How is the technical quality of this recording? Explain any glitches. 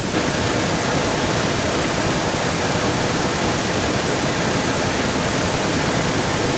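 The recording has one fault that runs almost its full length, heard over a call path that carries nothing above 8 kHz. From 0.12 s to the end, a second copy of the speech trails the original by about 342 ms, at roughly the same loudness. This is likely an echo leak: a loudspeaker on the other end fed its microphone, the echo canceller missed it, and the delayed copy returned.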